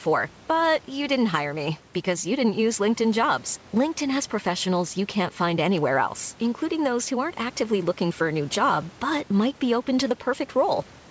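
No technical faults are audible.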